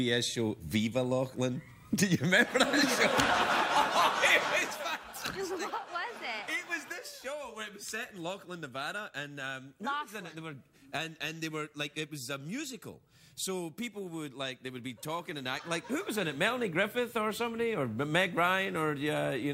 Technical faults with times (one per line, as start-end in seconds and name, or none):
none